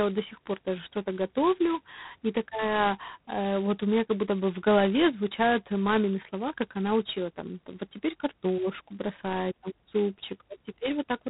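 The whole clip has heavy G.726 ADPCM damage: speech cut off above 3.9 kHz, with a harsh rasping hiss riding its level, which points to the 16 kbit/s mode.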